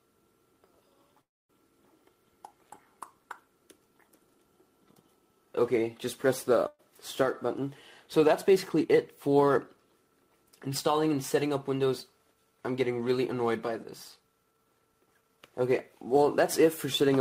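The clip is a piece of received call audio with three kinds of fault. From 1.21 to 1.51 s the sound stops. The last sound is carried on briefly, then about 260 ms of silence follows. The audio then picks up exactly where it left off, with nothing lost. That is a call audio freeze, likely from packets held up in transit so the jitter buffer ran empty. The 279 ms gap adds the same amount of delay. At 6.67 to 6.81 s there is a burst of packet loss. The receiver fills 113 ms by extending the last sound and fading it, with about 20 ms of silence inside. When the audio returns it has jumped ahead. About 120 ms of the original is missing. Two stretches show jitter buffer speed-up. From 8.49 to 9.75 s the audio runs at 106% speed, and from 14.51 to 15.38 s at 119%. The pitch stays the same in both. Both stretches sound hurried, the second more so. The receiver was trimming excess buffered delay. 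It cut many short pitch-period pieces in a row, roughly a tenth of a second in the first stretch and about a fifth in the second.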